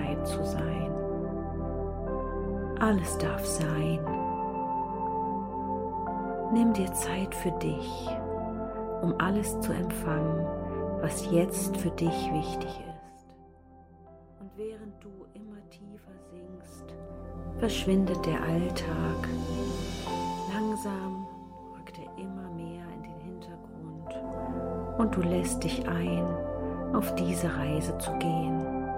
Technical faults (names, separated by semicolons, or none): zipper noise